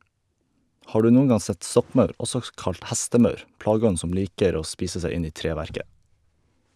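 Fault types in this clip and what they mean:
Resampler restarted on every block: the rate converter seems to have processed the speech in 100 ms chunks, each one on its own, so at every chunk edge it worked without the real neighbouring samples and left a small error. You hear it as a steady tick at 10 per second, running right through the clip and riding on the speech. The halved bandwidth fits a 48 kHz to 24 kHz conversion.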